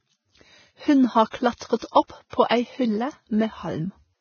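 Throughout the speech, a heavily starved transform codec, likely Vorbis compression at a very low rate, around 17 kbps by the sound of it, has removed everything above 6.6 kHz and quantised the remaining treble so coarsely that detail turns into noise. The result is a dull, band-limited sound with a grainy hiss and roughened, gritty vowel tones.

Pre-echo appears where sharp onsets land late in a codec block, so quantisation noise sized for the loud attack spills into the quiet stretch before it. This happens at 1.30 to 1.33 s (30 ms), at 1.77 to 1.82 s (54 ms) and 1.91 to 1.95 s (48 ms), both just before "opp på ei hylle", at 2.30 to 2.33 s (35 ms) just before "på ei hylle", and at 2.48 to 2.51 s (30 ms). Each is a brief hiss leading into a softened, smeared attack.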